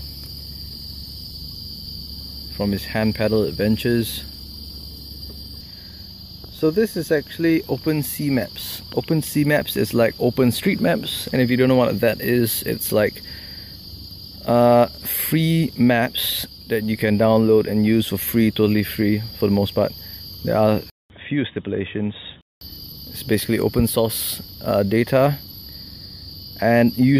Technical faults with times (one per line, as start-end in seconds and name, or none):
20.90-22.61 input switched to a poorer device